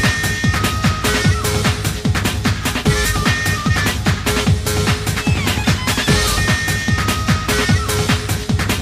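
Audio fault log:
No faults heard.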